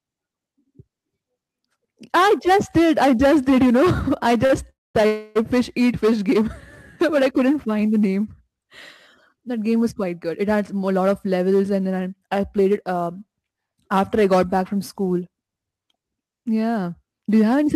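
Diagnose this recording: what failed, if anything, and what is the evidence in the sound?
Sample clock jitter runs through the whole clip, a converter-stage fault. A faint roughness rides on the speech, strongest on loud and bright sounds and gone in pauses. Timing error of around 7 µs moves each sample slightly, leaving error roughly 30 dB below the signal.

A short stall from a late packet at 4.45–4.52 s is a network and jitter-buffer fault. The sound is held for 41 ms with a slight buzz or dip, then resumes where it stopped. The buffer ran dry until the packet came, adding 41 ms of delay.

Two call audio freezes, at 4.70–4.96 s and 5.06–5.37 s, both fall just before "fish eat". The first fades to about 0.21 s of silence. The second is filled for 289 ms without falling silent. Both are likely caused by packets held up in the network, emptying the jitter buffer. Playback resumed without loss, adding 249 ms and 289 ms of delay.

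A jitter buffer speed-up affects 10.55–11.00 s, just before "of levels and then", and 17.17–17.75 s. The speech sounds hurried at unchanged pitch, running about 8% and 7% fast. The receiver trimmed short pitch-period pieces, around 40 ms and 50 ms in total, to shrink excess buffered delay.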